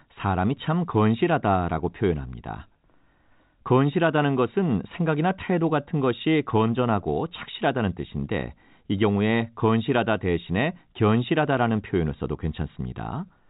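No faults in this speech.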